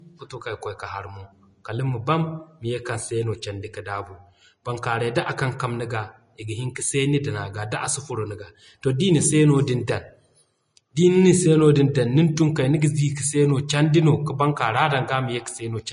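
Speech that sounds hissy and grainy throughout, with roughened tones and nothing above 10.5 kHz. The likely cause is Vorbis compression at a low bitrate, consistent with about 33 kbps.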